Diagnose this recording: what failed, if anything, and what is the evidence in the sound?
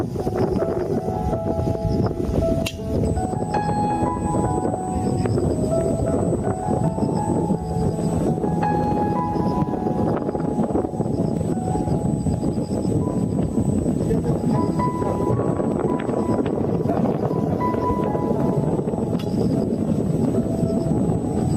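Throughout, loud and soft parts sit close in level and the sound is squashed, with the gain swinging by around 10 dB: gain pumping, likely excessive input gain driving a fast processing-stage limiter.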